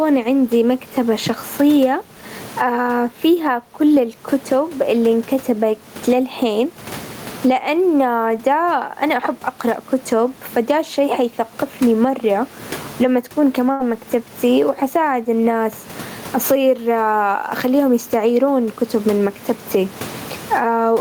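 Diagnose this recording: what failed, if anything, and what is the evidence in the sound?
Gain pumping runs throughout, at the call-processing stage. The gain swings by around 20 dB. Likely cause: input gain set far too high, with a fast limiter clamping every loud sound.

A burst of packet loss occurs at the network stage, from 13.71 to 13.82 s. The receiver holds the last sound and fades it for 81 ms. Speech then resumes with 80 ms missing.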